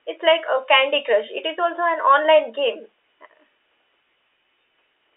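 No technical faults occur anywhere in this speech clip. A faint room noise sits about 55 dB below the speech, and the G.711 telephone coding limits the sound to a line band of about 250 Hz to 3.6 kHz.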